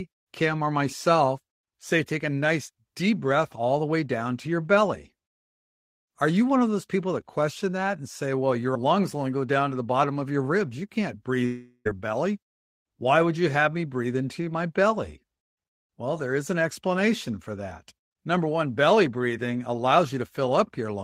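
Speech clip with a long network dropout from 11.45 to 11.87 s: the sound smears into a fading buzz for about 0.4 s, then drops to silence, and returns with roughly 0.4 s likely lost in transit.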